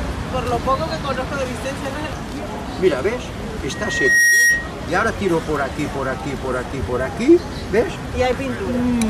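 At 3.71 s a loudspeaker feedback squeal kicks in and runs until about 4.72 s. It's a single tone at 1.9 kHz that swells over roughly half a second, ending up around 10 dB above the rest of the sound. What's going on is a mic hearing the speaker it feeds, with the loop gain at that one frequency tipping past unity, so the tone keeps feeding itself until the loop gets broken.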